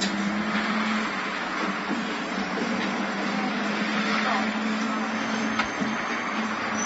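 It's a short everyday-sound recording, and the whole thing comes across dull and smeared, with nothing above about 7.6 kHz and a warbly, fizzy texture on anything sustained. That's likely AAC compression, with the band-limiting fitting AAC-LC squeezed down to a low bitrate, somewhere around 24 kbps. Then from 1.37 to 1.54 s there's a short, irregular burst of scratchy crackle, loose connector crackle, where a worn or dirty contact kept making and breaking and chopped the signal for that stretch.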